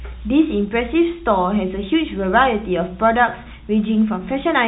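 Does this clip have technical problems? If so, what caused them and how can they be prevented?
No, there are no technical problems to point to in this speech clip. It has passed through a WebRTC call path using the G.711 mu-law codec, which is why there is no sound above 4 kHz and it has the familiar narrowband telephone character.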